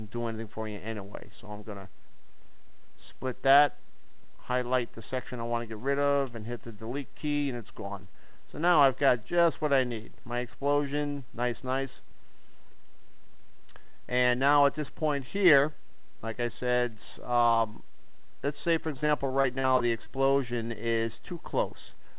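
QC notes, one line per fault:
19.0–20.08 s, repeated packet loss (robotic sound): eight short dropouts, longest 40 ms, each patched by stretching the last sound, so it goes choppy.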